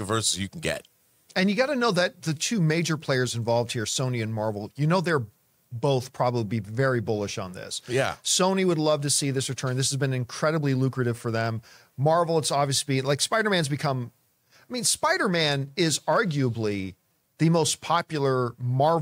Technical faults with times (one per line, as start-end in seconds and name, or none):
none